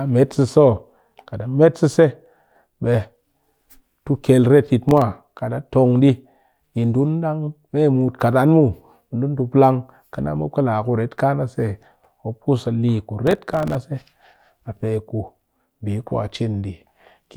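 The processor falls behind on its audio buffers twice, producing processor overload crackle in the speech. From 4.89 to 5.02 s, a handful of very short buffers, around a millisecond and a half each, miss their deadlines and drop to silence, leaving a brief gritty tick. From 13.27 to 13.75 s the overload lasts longer, with around thirty buffers missed, and the hard-edged gaps run together into a rough tearing crackle over the voice until the load eases.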